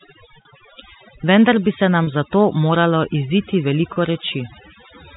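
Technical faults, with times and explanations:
Throughout: overdone noise removal. The noise reducer was set too strong. It pulls single frequency bands far down whenever they sit near its noise estimate. Quiet parts of the speech vanish with them. The background drops and breaks up into twinkling specks.
0.42–0.45 s, 2.04–2.07 s, 3.93–3.96 s: packet loss with pitch repetition. Each gap is 30 ms, which fits one lost packet. The receiver fills it by repeating the last pitch period, heard as a brief, buzzy held note. The second falls between "bi se" and "za to moralo iziti"; the third follows "za to moralo iziti".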